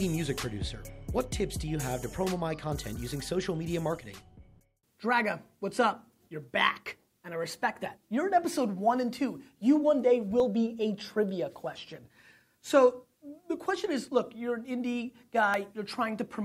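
At 10.4 s and again at 15.54 s, the sound jumps ahead abruptly, with no gap of silence. Around 20 ms is missing each time. This is likely a dropped buffer (overrun): samples were overwritten before being read, and the remaining audio was spliced together.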